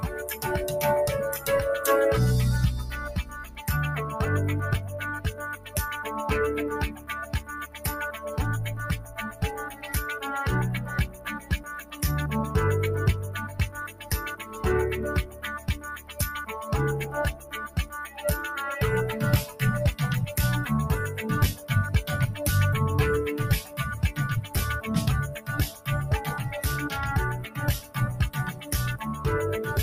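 A noise suppressor built for speech stays active on this sound from start to finish, treating sustained material and decays as noise. Level swings by around 10 dB. Unlike a compressor, it spares transients and pulls down what lingers, so the audio pumps and thins.

Sound cut by the noise suppressor occurs at 0.03–1.46 s (about 9 dB), 3.03–19.61 s (about 11 dB), 21.55–21.7 s (about 8 dB), 23.61–25.87 s and 27.46–29.25 s (both about 11 dB). Held tones sink and tails are cut short rather than dropping out entirely.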